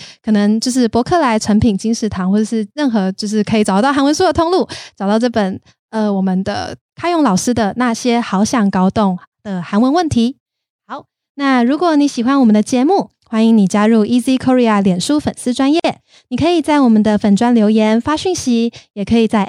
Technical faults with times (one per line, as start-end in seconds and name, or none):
15.80-15.84 gap at a join of encoded pieces